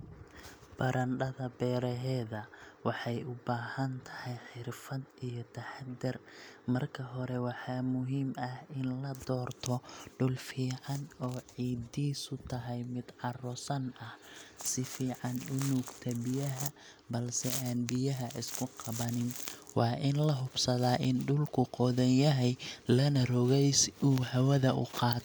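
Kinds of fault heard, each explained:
No dropouts, distortion, noise bursts, timing glitches or level jumps can be heard at any point in the recording.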